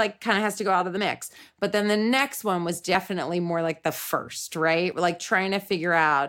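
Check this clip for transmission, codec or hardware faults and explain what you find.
One fault stands out in this speech clip: audio missing between chunks, at 4.92 s. A sliver of roughly 30 ms is gone and the sound on either side is butted together, so the speech jumps forward rather than pausing. The likely cause is a recorder or processor handing off between 2-second blocks and dropping samples at the boundary. Unlike a network dropout, no silence or smeared concealment fills the gap. The material is simply absent.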